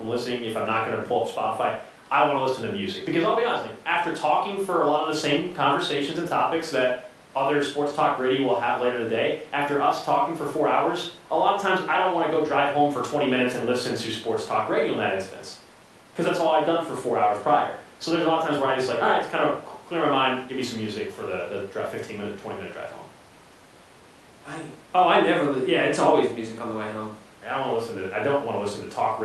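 The speech recording has no technical faults. It has passed through a WebRTC call path working normally, and its top end stops at about 12 kHz, which fits the Opus codec carrying the call.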